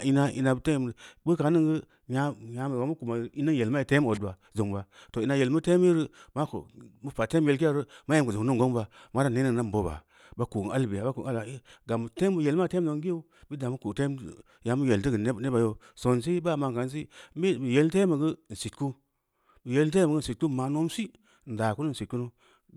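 No technical faults are audible.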